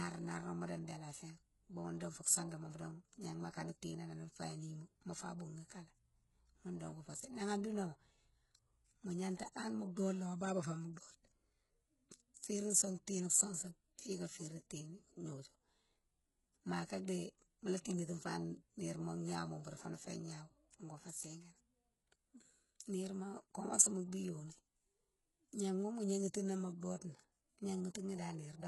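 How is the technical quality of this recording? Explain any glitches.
The recording is heavily compressed throughout. From start to finish, s sounds are gritty and lispy with synthetic treble ending at 11.5 kHz. This is likely heavy HE-AAC compression copying lower bands upward, which fits a bitrate near 12 kbps.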